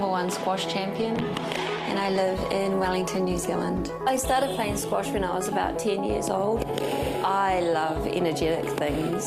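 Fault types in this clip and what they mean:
call bitrate drop: From about 0.97 to 6.01 s the sound turns rough, watery or muffled, then clears; this fits the call's encoder falling from 48 to 16 kbps.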